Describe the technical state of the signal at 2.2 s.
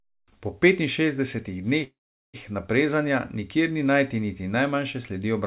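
At 2.2 s the signal is inside a call audio freeze running from 1.84 to 2.36 s. The receiver stretched the last sound into a brief fading buzz or hiss and then silence, likely from a jitter buffer starved by delayed packets. Playback then resumes unchanged, about 0.5 s late.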